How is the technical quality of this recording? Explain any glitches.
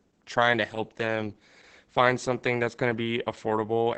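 Quality's pretty rough; the whole clip has Opus voice compression damage from start to finish. The SILK speech coder is working with very few bits, which fits a bitrate around 10 kbps. It cuts the band off at 8 kHz and codes the excitation coarsely, so the speech sounds muffled, hoarse and a bit robotic.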